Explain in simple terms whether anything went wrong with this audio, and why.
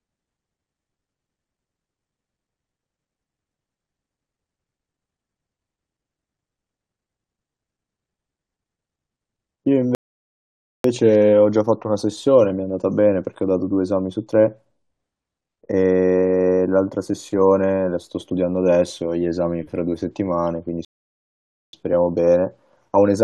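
Twice the speech stops dead and then carries on exactly where it left off, first from 9.95 to 10.84 s and again from 20.85 to 21.73 s. These are rebuffering stalls: the player ran out of downloaded audio and paused until more data arrived. No speech is lost or skipped. Each gap simply inserts silence, adding about 0.89 s and 0.88 s respectively, so the recording runs slightly longer than it should.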